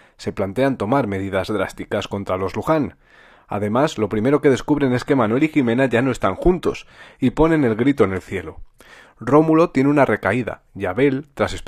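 The adaptive stream dropped to a lower bitrate from 4.82 to 8.82 s: the connection slowed and the player switched for four seconds to a leaner encoding, which fits a move from AAC-LC to low-rate HE-AAC. Nothing survives above 14.9 kHz there, the treble thins, and quality changes abruptly at both ends with no gap.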